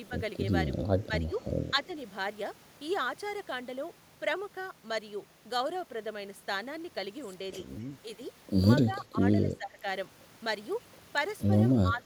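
The speech ducks four times: briefly and only a few decibels from 1.07 to 1.33 s, by about 10 dB from 8.84 to 9.24 s and again from 9.51 to 9.85 s, then by about 15 dB from 11.82 s to the end. This is likely speech suppressed in double talk, where an echo canceller turns the near talker down while the far side is also speaking. Unlike packet-loss dropouts, the level sinks and recovers rather than snapping to silence.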